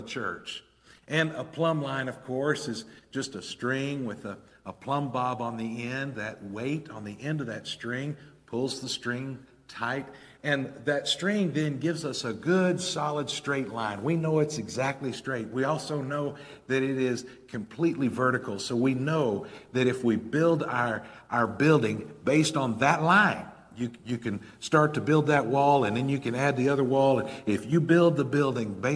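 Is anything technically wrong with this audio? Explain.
No, nothing technically wrong can be heard in this audio. There is no dropout, distortion or other defect anywhere in the recording.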